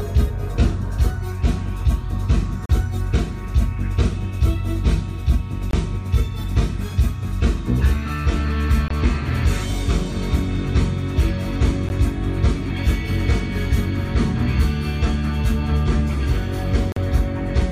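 At 2.66–2.70, 5.71–5.73, 8.88–8.91, 11.89 and 16.92–16.97 s the sound cuts to silence for 13 to 42 ms. This is a Bluetooth stall, likely caused by interference emptying the headphones' buffer while packets were resent. The gaps fall at irregular intervals and drop to silence.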